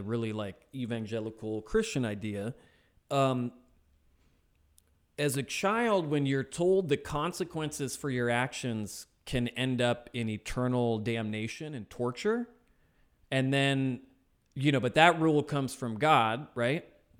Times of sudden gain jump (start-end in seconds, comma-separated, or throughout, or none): 11.52-11.96